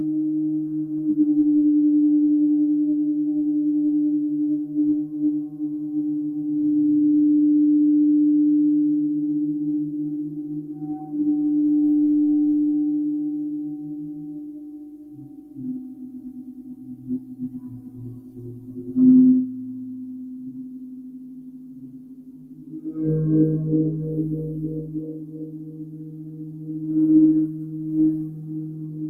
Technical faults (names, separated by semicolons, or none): noise suppressor applied to music or sounds